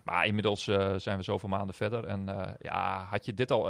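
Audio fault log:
0.47–0.57 s, lost packet rebuilt from error correction: no gap, but about 60 ms of rougher, noisier speech before "eh zijn we zoveel", fitting three lost packets replayed from low-bitrate copies in later ones. Spectrogram shows grainier, smeared harmonics; waveform stays continuous.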